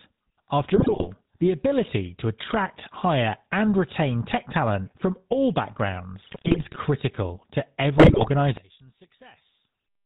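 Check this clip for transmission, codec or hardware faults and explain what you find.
Three faults are audible: GSM coding across the whole clip, GSM bit errors in three short bursts, and a likely channel-polarity problem near the end.

The GSM full-rate codec is present from start to finish, and its damage is plainly audible. The codec rebuilds the signal from a vocal-tract filter driven by a regular pulse excitation that keeps only every third sample, and it discards everything above 4 kHz. The speech therefore sounds band-limited, buzzy and gravelly, consistent with the 13 kbps full-rate scheme.

GSM bit errors occur at 0.74–1.08 s, 6.22–6.77 s and 7.98–8.30 s, with the last burst the most severe. Corrupted bits reach the decoder, so the filter, pitch and gain parameters it receives are wrong for the affected frames. Those frames come out with a distorted spectrum and sudden level jumps. 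In each burst the speech breaks into squawks, pops and gargling before recovering. The second burst is the longest.

From 8.57 s to the end, the speech drops by about 19 dB. The likely cause is one stereo channel with inverted polarity that is then summed to mono. When the two channels are combined, the sound they share cancels, speech and background alike. What remains is only the small difference between the channels, a faint residue of the sound.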